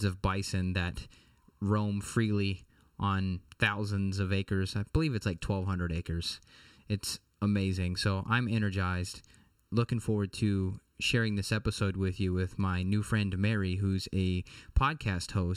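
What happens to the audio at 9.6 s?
At 9.6 s the speech sounds hollow and phasey from channel delay (comb filtering), present throughout the clip. One channel lags the other by about 0.7 ms. Summed to mono, they cancel in evenly spaced notches, the first near 700 Hz.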